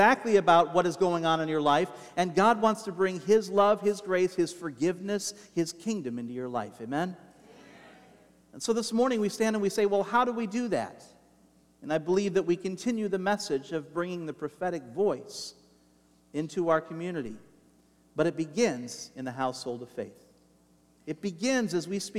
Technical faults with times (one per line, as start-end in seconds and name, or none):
17.26 DC step